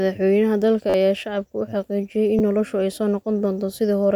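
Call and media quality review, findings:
Repeated buffer at 0.90–0.94 s. Same 10.7 ms slice played four extra times, hard joins, heard as a brief buzz repeating about every 11 ms. Fits a 512-sample buffer. Playback underrun, around 40 ms of audio lost. Second at 2.39 s: one repeat, a single click, about 10 ms lost.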